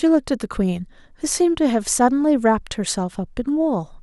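Nothing technical goes wrong anywhere in this bit of speech, so there's no fault to point to.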